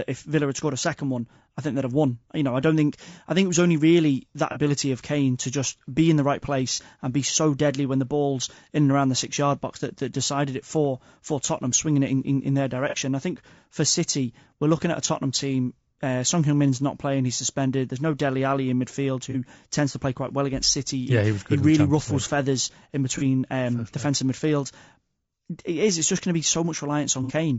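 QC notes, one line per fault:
throughout: low-delay AAC compression. The speech has a plainly audible rough, grainy texture, with noise filling in between the pitch harmonics and a top end that sounds thin and a bit synthetic. That points to a low-delay AAC codec, likely AAC-ELD, at around 32 kbps. Its short frames can't resolve the harmonics cleanly and eat bits fast, so there isn't enough left to code the voice smoothly.
4.52 to 27.32 s: AAC frame loss with concealment, six short dropouts, at 4.52 to 4.57 s, 6.74 to 6.80 s (between "be in the right" and "and be so deadly"), 12.89 to 12.95 s (after "in in in their", before "I think for"), 19.31 to 19.36 s (after "in midfield", before "tends to play quite"), 23.18 to 23.23 s, and 27.23 to 27.32 s. Each is a brief smeared, noisy or phasey patch where the decoder papers over a gap, about 30 ms in the first five, by reusing the last good spectrum. 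The last one runs about 60 ms, which fits two lost frames back to back.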